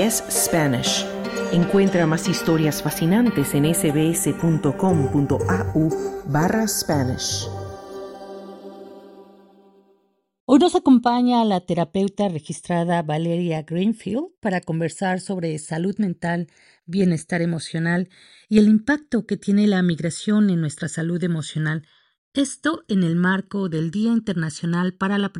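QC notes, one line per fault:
Throughout, channels drifting apart: the left-right delay grows steadily to roughly 0.7 ms by the end, pointing to two devices on separate clocks about 30 ppm apart. Summed to mono, comb notches glide slowly one way, unlike a flanger's repeating sweep.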